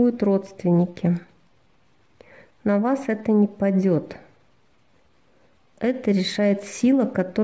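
Nothing goes wrong anywhere in the audio here, so there's no fault to point to at any moment.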